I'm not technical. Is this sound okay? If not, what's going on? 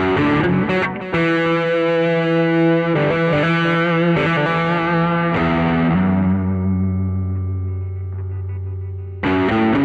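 Yes, this sound is okay. There's nothing wrong with it that you'd need to worry about or fix.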